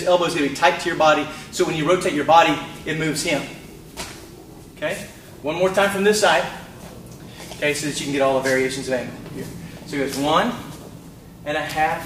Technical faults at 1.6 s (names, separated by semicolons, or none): none